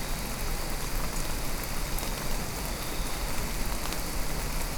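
No technical faults can be heard in this recording of sounds. Nothing interrupts or disturbs the audio at any point.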